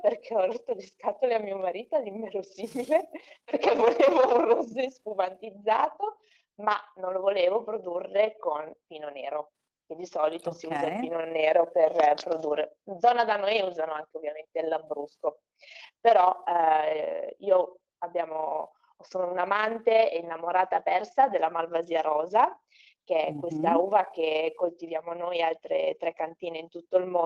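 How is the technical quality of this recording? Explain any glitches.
The quality takes a real hit from one problem that runs the whole way through: overlap-add ripple. The audio was chopped into overlapping windowed frames and stitched back together, but the windows don't add up to a steady gain, so the level pumps up and down by about 6 dB once per frame. That happens around 30 times a second, which gives a constant fast flutter, a rough tremolo sitting on everything.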